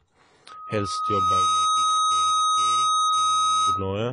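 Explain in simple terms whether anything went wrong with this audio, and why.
Loudspeaker feedback squeal runs from 0.49 s to 3.95 s. A microphone was picking up the loudspeaker it was feeding, so the sound kept looping round and growing at one pitch, here a tone near 1.3 kHz. It swells over about a second into a steady whine that ends up louder than the speech itself, and it only stops shortly before the clip ends.

AAC compression affects the whole recording and is the likely cause of its dull, smeared character. This kind of audio shrinking throws away detail the ear is expected to miss, and when squeezed this hard it cuts off the highest frequencies entirely. Nothing is left above 10 kHz. The damage is plainly audible, leaving a muffled sound with a watery or fizzy edge on hissing consonants.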